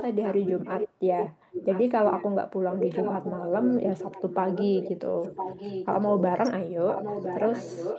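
From the start to 0.89 s, and again at 1.2–2.25 s and 2.7–4.9 s, a second copy of the speech trails the main voice by about a second (1.01 s), only a little quieter, roughly 5 dB down. This echo leak likely comes from a far-end loudspeaker whose echo canceller let part of the signal back through. On a spectrogram the harmonic patterns repeat as a shifted, slightly weaker ghost.

Inside that stretch, at 3.8–3.99 s, the voice briefly dips by a few decibels for well under a tenth of a second, then recovers. This is speech suppressed in double talk. With both sides sounding at once, the canceller likely mistook the talker for echo and pulled the level down. On a waveform it shows as a shallow notch in the envelope.

At 5.09–5.26 s the same double-talk suppression returns much harder, around 30 dB deep. Roughly 0.15 s of speech nearly vanishes, leaving a clear gap in the waveform and a blank column on the spectrogram.

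The echo leak resumes at 5.25–6.22 s, weaker at about 10 dB below the speech. It comes back at about 5 dB down from 6.88 s to the end, with the same one-second lag. Throughout, the Opus call path limits content to below 8 kHz.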